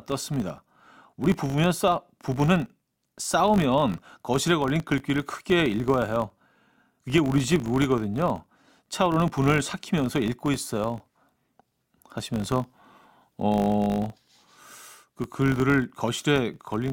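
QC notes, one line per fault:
Throughout: filter restarted on every block. The filter drops its internal state at each block boundary and begins again from zero, so every block opens with a brief start-up transient. These arrive 50 times per second, which points to 20 ms blocks, and are heard as a buzz that rises and falls with the speech level. A spectrogram shows vertical striations every 20 ms with harmonics stacked at 50 Hz spacing, and the waveform shows small periodic discontinuities at each boundary.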